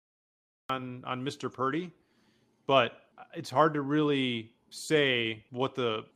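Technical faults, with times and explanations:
0.00–0.70 s, cut-off start: the clip opens on digital silence, and the speech enters abruptly at 0.70 s partway through a sound, with no natural attack or fade-in. Capture began late, so the beginning of that sound was never recorded.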